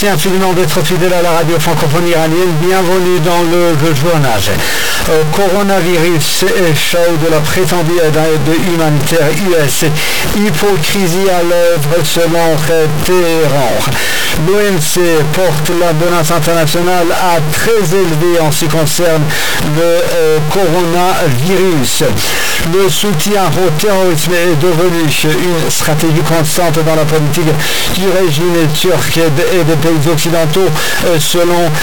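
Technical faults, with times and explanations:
Throughout, stuck bit: harsh, buzzy distortion on everything, with gaps filled by loud noise. That's likely one high-order bit stuck, knocking values by steps around -10 dBFS.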